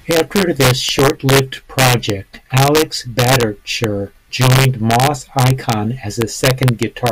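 Speech clip with integer overflow running right through it. The level sits about 2 dB past what the integer format can hold, and instead of being limited, the loudest peaks wrap around to the opposite sign, jumping across the whole range. Only a small fraction of samples go over, maybe half a percent, so you get sharp, violent cracks on the loudest moments of the speech, much harsher than ordinary clipping would sound.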